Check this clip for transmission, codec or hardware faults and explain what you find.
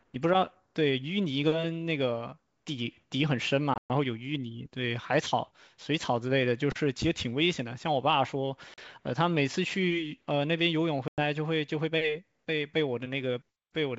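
Three short dropouts are present, all from packet loss on an ADPCM call, heard against clear wideband G.722 speech. They occur at 3.74–3.91 s (140 ms of silence over 160 ms, longest run 120 ms, several packets), 8.74–8.79 s (40 ms) and 11.08–11.21 s (100 ms). Each missing stretch becomes abrupt silence. When audio resumes, the decoder's predictor and step size no longer match the sender's, so speech returns slightly distorted before settling. On a waveform these appear as flat, hard-edged gaps; a spectrogram shows blank vertical bands.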